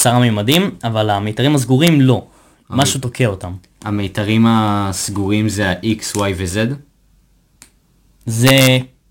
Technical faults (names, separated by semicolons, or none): integer overflow; loud pop